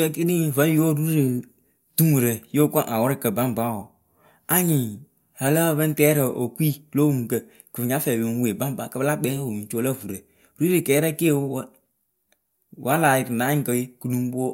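No technical faults can be heard anywhere in the recording.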